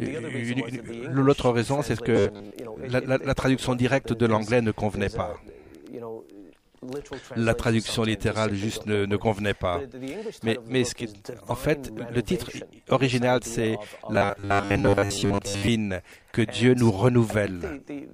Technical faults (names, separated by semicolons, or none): robotic sound from repeated short buffers